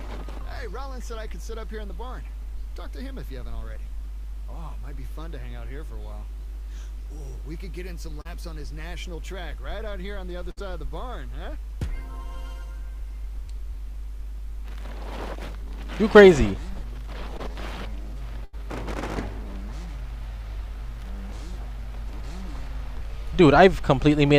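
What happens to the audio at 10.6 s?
Around 10.51 to 10.59 s there is a burst of packet loss. A run of audio lasting about 60 ms never arrived in time, so the receiver extended the last sound it had and faded it down across the gap before resuming further on, with that stretch skipped. Unlike a plain dropout, the gap is not silent or cut off abruptly. It holds a smeared, decaying continuation of the preceding sound, then jumps ahead.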